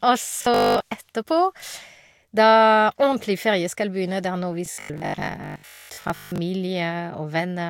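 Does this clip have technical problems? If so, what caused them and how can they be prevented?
Yes. Robotic sound from repeated short buffers occurs from 0.38 to 0.80 s and again from 4.66 to 6.42 s. The speech becomes a stiff, metallic buzz with a fixed pitch of 50 Hz, which fits a 20 ms buffer being replayed. The likely cause is audio arriving too slowly, so the software repeats the last fragment to fill the gaps. Most of the real signal in these stretches is lost to the repeats. Larger playback buffers and a steadier audio stream, through adequate jitter buffering and less processor load, would prevent it.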